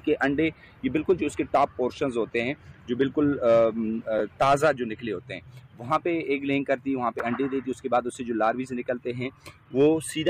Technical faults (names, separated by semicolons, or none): chunks out of order